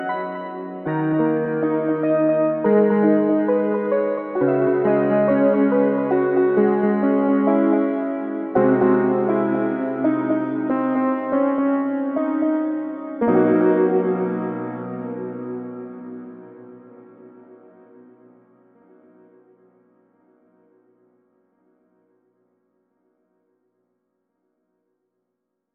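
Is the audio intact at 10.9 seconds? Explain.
No. At 10.9 seconds the audio carries a doubled audio track, present throughout the clip rather than starting there. A second full-band copy of the same sound trails the original by roughly a third of a second, only a few decibels quieter, so every onset is heard twice as a dry, distinct repeat with no reverberant tail or room colour. This is likely caused by the signal being captured again through a slower path, or by two out-of-step copies held in an edit.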